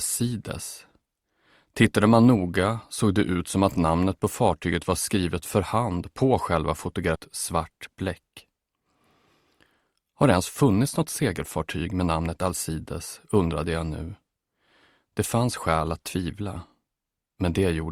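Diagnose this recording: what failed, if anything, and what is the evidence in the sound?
About a second of queued audio was dropped in the network or by the jitter buffer at 7.15 s, a skip ahead: playback jumps forward with no gap, joining the two sides almost directly.

The jitter buffer held too much audio and trimmed pitch periods to catch up, a jitter buffer speed-up: audio runs 6% fast from 7.53 to 8.86 s and 11% fast from 9.87 to 12.77 s, hurried at unchanged pitch.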